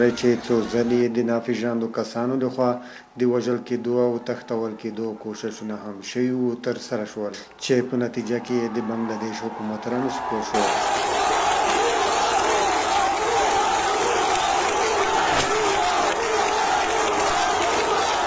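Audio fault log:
No faults; the call audio stops at 8 kHz.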